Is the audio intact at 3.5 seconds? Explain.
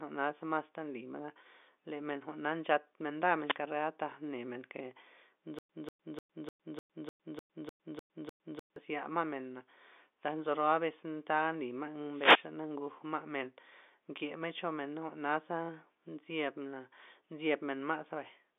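No. From 3.44 to 3.57 s, a wireless microphone noise hit: the FM signal fades, receiver static swishes through, and a spectrogram shows a brief broadband smear.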